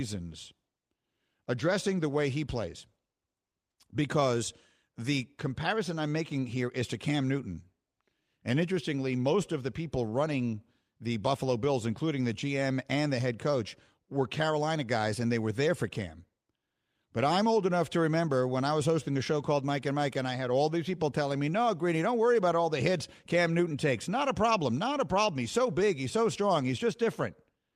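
A speech recording, and nothing in it stands out as a technical problem.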